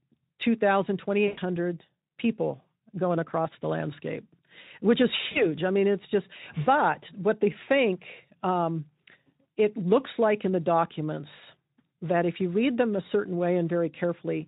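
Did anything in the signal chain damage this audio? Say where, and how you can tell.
Yes. VoIP packet loss concealed by the speech codec damaged the audio at the network stage, three times. At 1.27 to 1.40 s about 100 ms of audio is missing. At 5.31 to 5.45 s and 7.63 to 7.69 s about 40 ms each is missing. Each gap is stretched into a buzzy tone or coloured noise that fades, and the speech stays weak briefly afterwards. The decoder repeated its last pitch and filter with falling gain. The gap lengths point to five and two lost 20 ms frames.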